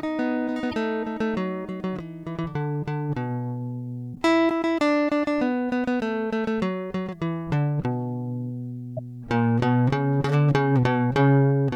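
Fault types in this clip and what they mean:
Damaged data in a compressed stream: three short glitches cut through the music, at 0.71–0.74 s, 4.12–4.17 s and 8.97–8.99 s. Corrupted bytes in the compressed stream make the decoder misread those frames and lose sync until it finds the next frame header.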